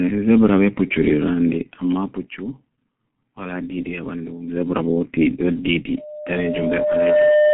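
A speech recording with two faults. Throughout, the G.723.1 codec leaves it muffled and hoarse, with smeared consonants and nothing above 3.8 kHz. That damage, beyond mere band-limiting, fits a rate near 6 kbit/s. From 5.97 s to the end, a loudspeaker feedback squeal at 602 Hz swells over about a second and a half until it sits slightly above the speech. Its growth separates it from a steady interfering tone.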